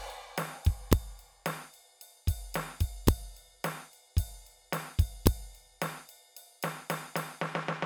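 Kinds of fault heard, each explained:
Integer overflow: music peaks about 1 dB past the integer limit wrap to the opposite sign, causing sharp cracks at 0.93, 3.08 and 5.27 s.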